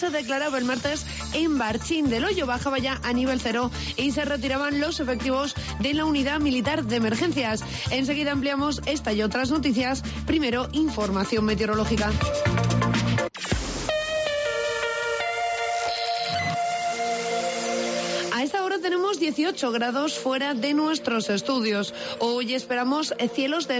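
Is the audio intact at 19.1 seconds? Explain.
Yes, at 19.1 seconds the audio is intact, with nothing heard beyond the ordinary trimming of the lowest bass and the 8 kHz upper limit that come from the call microphone processing it passed through.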